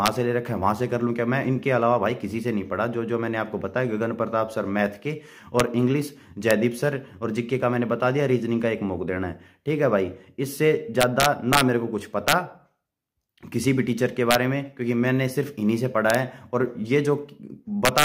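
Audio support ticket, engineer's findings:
Integer overflow at 0.06, 5.60, 6.51, 11.01–11.61, 12.28–12.33, 14.31–14.35, 16.10–16.15, 17.85–18.04 s. Harsh cracks on loud peaks, worst at about 3 dB overdrive. Probable fixed-point gain/sum stage wrapping to opposite sign, not saturating.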